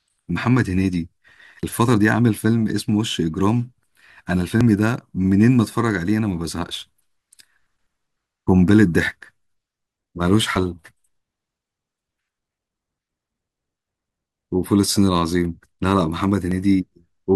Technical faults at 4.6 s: audio missing between chunks

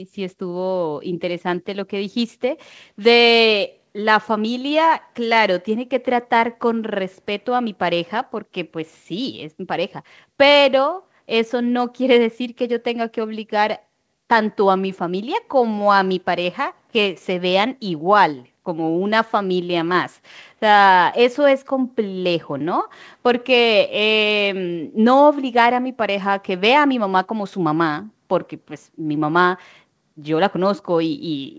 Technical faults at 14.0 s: none

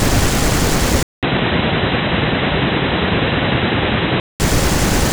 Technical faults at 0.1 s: none

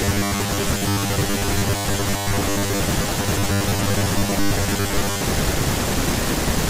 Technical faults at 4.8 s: robotic sound from repeated short buffers

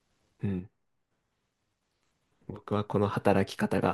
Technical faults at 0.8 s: one channel drops out

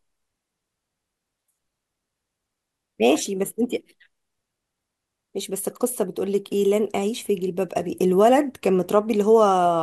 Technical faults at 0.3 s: none

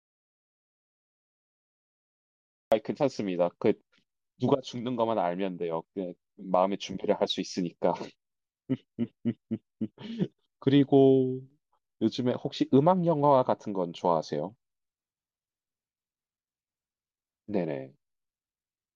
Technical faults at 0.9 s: audio dropout to silence

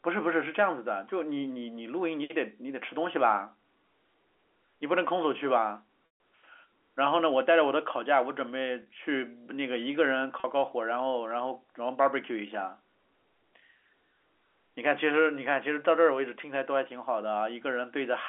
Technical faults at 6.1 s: packet loss with pitch repetition

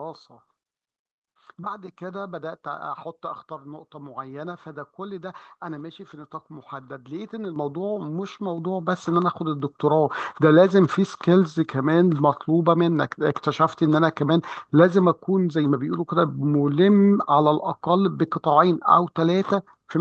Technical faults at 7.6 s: microphone volume stepped up

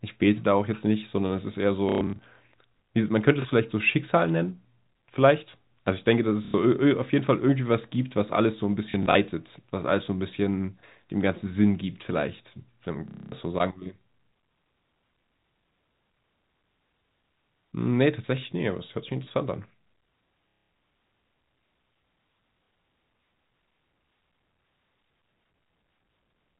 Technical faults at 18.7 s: none

